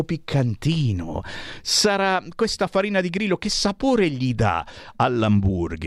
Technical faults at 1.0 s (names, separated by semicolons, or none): none